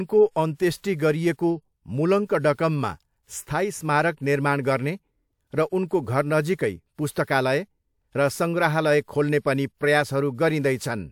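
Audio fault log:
0.78–0.84 s, pre-echo: a short hiss runs for about 58 ms ahead of a sharp onset in the speech, which sounds softened and smeared. A transform codec spread quantisation noise sized for the loud attack across its whole block, filling the quiet lead-in.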